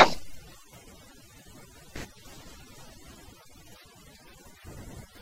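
Overdone noise removal affects the speech from start to finish. A noise reduction stage was set too aggressively for the level of background noise, so individual frequency bands that sit close to its noise estimate are pulled far down or gated out entirely. Quieter components of the voice fall below that threshold and are removed with the noise. The gaps between phrases drop to near silence scattered with twinkling specks.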